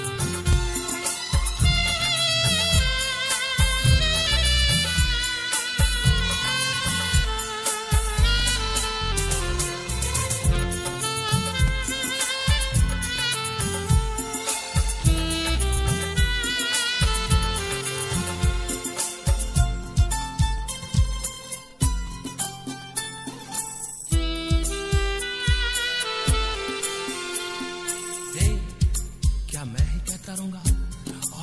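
Nothing in this audio stands out as a technical fault, so there's no problem to pin down.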